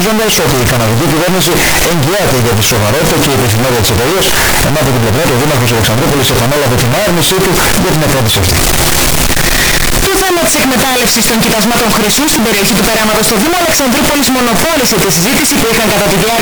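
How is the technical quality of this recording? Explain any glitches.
The technical quality is poor: the whole recording is wrecked by one fault. Signed and unsigned mixed up, present throughout the clip. The sound is very loud and harshly distorted from start to finish, and quiet passages come through as loud as everything else. That behaviour points to 16-bit samples likely being read with the wrong sign convention, so the top bit flips and every zero crossing turns into a jump across the full range.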